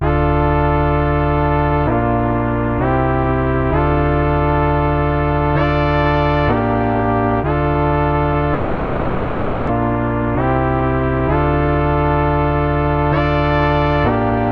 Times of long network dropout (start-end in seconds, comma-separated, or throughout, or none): 8.53-9.71